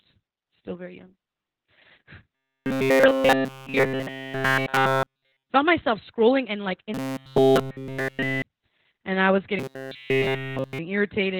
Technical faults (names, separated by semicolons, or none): Opus voice compression; robotic sound from repeated short buffers